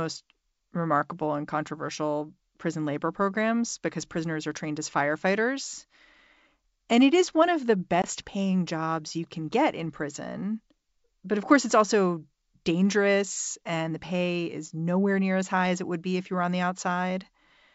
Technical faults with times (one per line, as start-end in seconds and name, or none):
8.02-8.05 packet loss on an ADPCM call